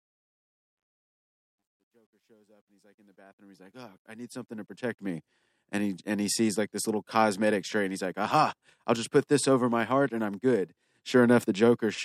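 From the start of the speech to 5.18 s, the fade-in shows truncation distortion on a fade. The gain ramp was quantised to what sounds like 12 bits, with no dither, so at low levels the waveform collapses into a few coarse steps. The worst stretch, 0.0 to 3.15 s, is gritty. The fade then rises and reaches full level by 5.18 s, just before "and he and he".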